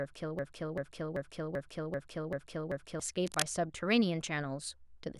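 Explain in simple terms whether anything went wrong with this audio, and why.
Two things went wrong. From the very start until about 3.0 s, the recording is stuck in a broken-record loop: a short piece of speech, roughly 0.39 s long, plays over and over, back to back, about seven times, and was already repeating when the clip begins. This is likely a player or stream that stalled and kept resending the last fragment it had stored. Whatever speech should have been heard in those three seconds is gone.

Shortly after, from about 3.27 s to 3.42 s, there is a brief burst of cable scratch noise, a rough, crackly rustle laid over the speech and nearly as loud as the speech itself. The likely cause is a worn cable, plug or control being moved, so that its electrical contact flickers rapidly and injects irregular bursts of noise into the signal for that moment.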